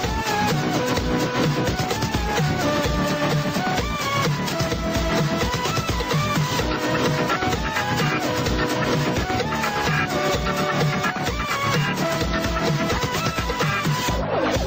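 Gain pumping runs through the whole clip, with the gain swinging by around 5 dB. Loud and soft passages sit close in level and the sound is squashed, likely from gain set too high feeding a fast limiter.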